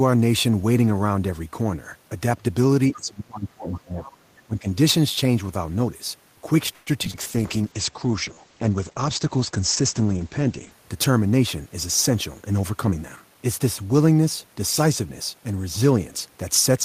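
Around 2.92 to 2.96 s, and again at 3.72 to 3.78 s, a faint second voice pokes through, about 25 dB under the main talker. That's other side's voice leaking through: the far end is likely playing on a loudspeaker and the echo canceller isn't scrubbing all of it from the mic.

Overlapping that, from 2.94 to 4.22 s, the main voice gets pushed down in patches, roughly a second in total and dipping by about 25 dB at its worst. Then there's a shorter, shallower dip of about 15 dB from 4.46 to 4.67 s. That's speech suppressed in double talk: with both sides talking at once, the canceller likely couldn't tell its own talker from the echo and turned everything down.

At 6.73 s the sound freezes into a fading continuation of itself for 132 ms, until 6.90 s, then carries on exactly where it left off. It's a call audio freeze: packets were likely held up, the jitter buffer ran dry, and a gap got inserted with nothing actually lost.

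Right after, at 7.05 to 7.08 s, there's a skip ahead. About 70 ms vanishes and the two sides butt together almost seamlessly, because the receiver jumped past audio to catch up on the delay that had built up.

At 7.11 to 7.17 s comes short concealed packet loss. About 60 ms never arrived, and roughly 27 ms of patched-in continuation covers it, so you hear a quick smear where the receiver extended the last sound and blended back.

From 7.14 to 10.83 s the sound goes rough and muffled, with nothing above about 8 kHz, down from a full 20 kHz before. That's a call bitrate drop, which sounds like the encoder going from roughly 32 kbps down to about 11 kbps after the bandwidth estimate fell, holding there for about 3.5 s.

Inside that stretch, 7.42 to 8.36 s, there's a jitter buffer slow-down. The audio drags to 91% speed at the same pitch, with about 96 ms added by repeating pitch periods to rebuild the buffer, so sounds get stretched out.

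Finally, 12.1 to 13.6 s brings a jitter buffer speed-up. Playback runs at 109% with the pitch unchanged, and roughly 150 ms trimmed out in small pitch-period pieces to shed excess delay, so it comes across as hurried.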